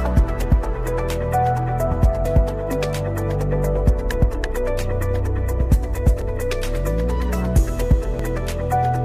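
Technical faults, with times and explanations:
2.25 s, 6.22 s and 8.19 s, overlap between stream segments: adjacent segment time stamps collide at boundaries on a 2-second grid, so the player discards 5 to 15 ms of sound it wrongly treats as repeated, and the waveform jumps, giving a brief click or skip.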